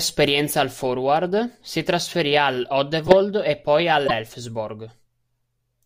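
At 2.98 s, after "si trasferì", a corrupt frame decoded produces a loud burst peaking around -5 dBFS lasting to 3.13 s, before "e poi". Damaged bits misplaced spectral energy across what sounds like several frames. A shorter, similar blip follows "e poi" at 4.06 to 4.11 s.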